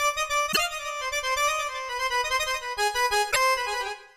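A brief blip cuts through the sound from 0.49 to 0.58 s, and a second from 3.28 to 3.36 s. Both are damaged data in a compressed stream: corrupted bytes made the decoder misread those frames and lose sync until it found the next valid frame header.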